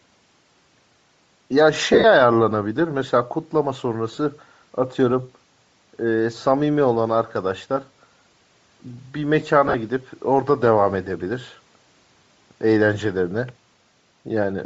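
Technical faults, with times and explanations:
Throughout: Bluetooth LC3 compression. The speech has a breathy, grainy edge, and the top of the spectrum sounds hissy and thin rather than detailed. The likely cause is LC3 coding at 32 kbps in 7.5 ms frames. At that rate the encoder cannot afford to code much of the upper band, so it zeroes it and fills the gaps with shaped noise. That makes the coding damage plainly audible across the whole clip.
1.93 to 2.04 s, 4.11 to 4.18 s and 9.68 to 9.75 s: lost LE Audio frames. At each spot the speech briefly turns into a rough, noisy smear instead of clear sound. The first is the worst, with 82.5 ms lost in bursts over about a tenth of a second and the longest gap about 50 ms. The later two each lose 37.5 ms over 60 ms in short runs of about 20 ms. For each missing frame the decoder replays the previous spectrum with scrambled phase, which turns tones into noise and fades them toward silence as the gap lengthens.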